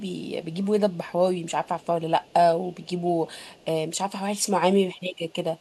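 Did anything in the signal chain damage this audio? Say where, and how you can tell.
Yes: an echo leak in call processing. A very faint copy of the speech trails 283 ms behind at 0.0, 0.9, 1.64, 2.2, 2.73 and 3.29 s, likely loudspeaker pickup the echo canceller missed.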